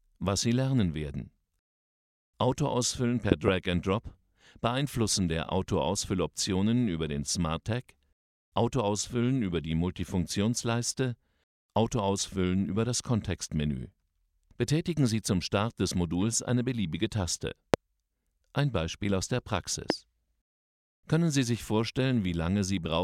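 Four loud pops break through the audio: a quick double pop between 3.32 and 3.50 s, then single sharp pops at 17.74–17.76 s and 19.90–19.92 s, each standing roughly 20 to 25 dB above the surrounding sound, which carries on underneath. These are most likely sudden voltage steps or pulses from a plug, switch, static discharge or driver glitch, added to the signal and shaped by the circuitry that followed.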